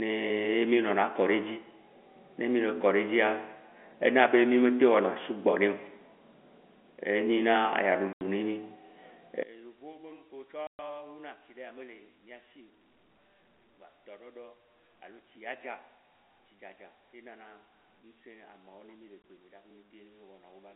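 Packet loss filled with silence breaks this telephone-band speech recording at 8.13 to 8.21 s (80 ms), 10.67 to 10.79 s (120 ms) and 19.22 to 19.24 s (20 ms). Each gap is a multiple of 10 ms, which fits 10 ms packets. The receiver substituted dead silence for the missing audio, so the speech drops out abruptly at hard edges. From 9.43 s to the end, the level collapses by about 27 dB and only a faint residue remains. This is most likely one channel inverted: one stereo channel has flipped polarity, so when the channels are summed to mono, the centred voice, common to both, largely cancels and leaves only their small differences. The audio still shows the 250 Hz to 3.4 kHz band of G.711 A-law coding, with at most faint codec damage.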